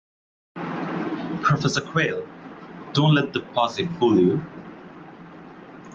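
No dropouts, glitches, clipping or other technical faults can be heard anywhere in this speech recording.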